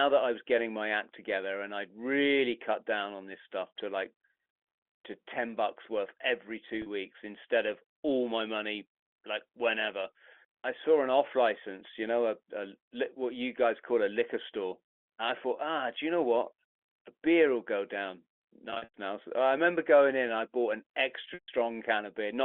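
At 6.82 s there's a short packet loss with pitch repetition: 40 ms goes missing and the receiver loops the last pitch cycle, giving a brief held, buzzy blip. Longer gaps follow at 18.7 s (180 ms scattered over 240 ms, longest run 100 ms) and at 21.34 s (140 ms). Those fade toward silence before the speech cross-fades back in over the narrow G.711 phone band.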